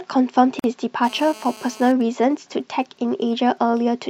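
At 0.59 s, separately encoded pieces of the recording were joined without trimming the encoder's start-up delay and end padding, leaving a gap at the join of encoded pieces. The speech drops into a 46 ms gap with smeared edges, then resumes exactly where it stopped.

From 1.04 to 1.92 s, a nearby 2G phone on a call is transmitting in bursts 217 times a second, and the audio circuitry rectifies those radio pulses. The result is GSM phone buzz, a hard, raspy 217 Hz drone rich in harmonics, sitting about 21 dB below the speech and unrelated to it.

From 2.01 to 3.94 s, a nearby 2G phone, in a call but with its user silent, sends only short groups of bursts, which the circuitry again rectifies. These GSM signalling bursts come through as faint, even ticks with a longer 217 Hz buzz twice a second, roughly 40 dB under the speech.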